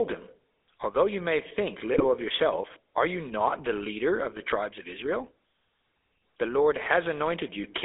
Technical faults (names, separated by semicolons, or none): GSM full-rate codec; GSM bit errors